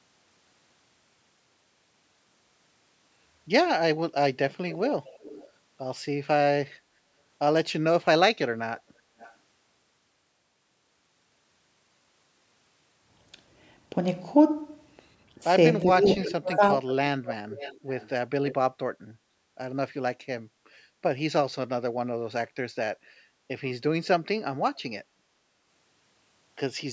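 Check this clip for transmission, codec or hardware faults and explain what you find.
Two call-path faults turn up here, both pointing back to the far end's echo handling.

Echo leak appears six times: 4.5–5.5 s, 9.19–9.34 s, 16.2–16.94 s, 17.25–18.09 s, 18.46–18.55 s and 24.75–24.79 s. You hear a delayed copy of the talker trailing behind. The delay is 366 ms at first, 441 ms at 9.2 s, then 506 ms from 16.2 s on. Its level ranges from about 15 dB below the speech (loudest, around 16–17 s) down to about 40 dB (barely there at 24.8 s). The likely cause is a speakerphone whose echo canceller didn't fully subtract what its mic picked up from the loudspeaker, so the leftover got sent back.

Speech suppressed in double talk hits at 15.83–16.78 s, overlapping that strong echo burst. The talker's level dips in pieces, bottoming out about 25 dB down, with roughly 0.7 s affected in all. That's likely the echo canceller failing to tell live talk from loudspeaker echo while both were active, and clamping down on everything. 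The band-limiting at 8 kHz is just normal call mic processing, not a fault.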